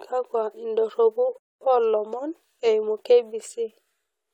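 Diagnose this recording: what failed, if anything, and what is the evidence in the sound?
At 1.38 s the speech drops to dead silence and picks up again at 1.61 s exactly where it left off, nothing skipped, about 0.23 s of time added. This is a rebuffering stall at playback: the player exhausted its downloaded audio and paused until more arrived.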